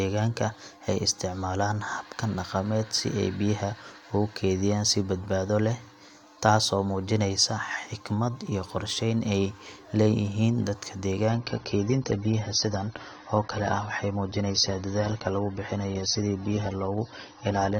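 At 11.30 s the speech steps down to a lower-bitrate version of the adaptive stream and stays there to the end. Everything above 6.3 kHz vanishes and codec artefacts thicken, which fits a drop from about 96 to 24 kbit/s. There is no gap or stall, unlike a buffering dropout.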